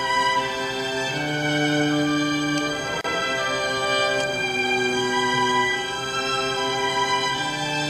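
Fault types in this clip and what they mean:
Gap at a join of encoded pieces: untrimmed encoder padding between separately encoded segments leaves a 33 ms gap at 3.01 s, seen as a flat waveform notch and a blank spectrogram column.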